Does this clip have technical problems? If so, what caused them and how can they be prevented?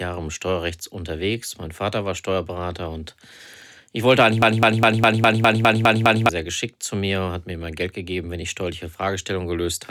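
Yes. After "ich wollte eigentlich", a broken-record loop runs from 4.42 to 6.29 s: a 204 ms fragment repeats nine times back to back before "sehr geschickt zu mir", and the speech in that span is lost. The likely cause is a stalled player, encoder or stream resending its last buffered fragment. Prevent it with stall detection that outputs silence or resyncs instead of replaying the buffer, and with enough network and processing headroom to avoid underruns.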